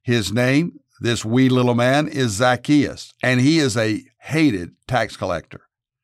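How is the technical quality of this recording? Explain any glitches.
No glitches turn up anywhere in this speech recording. Nothing in it breaks off, jumps or intrudes on the sound at any point.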